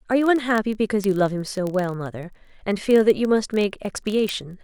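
From 0.12 s to 4.63 s, the speech carries word clock ticks. They arrive at a steady rate, roughly every 20 ms, about two hundred in all. Each is sharp and brief. The receiving device runs on its own clock, unlocked from the sender's. The two clocks drift apart by roughly a thousand parts per million. At each slip, one sample is dropped or repeated. That small break in the waveform is the tick.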